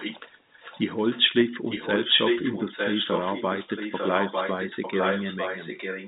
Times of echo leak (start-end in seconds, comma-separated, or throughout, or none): 0.00-0.20, 0.53-1.21, 1.65-6.07